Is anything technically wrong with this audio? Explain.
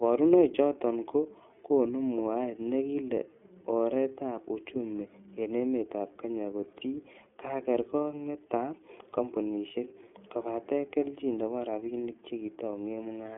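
Yes. The speech has been through the iLBC codec for its whole length. The band is confined to a telephone line of roughly 250 Hz to 3.4 kHz, with nothing above 3.6 kHz. iLBC codes each frame's excitation independently of the previous one, which fits the 30 ms frame, 13.33 kbps mode. That frame-by-frame coding gives the speech a plainly audible rough, slightly synthetic texture on top of the dull, narrowband sound.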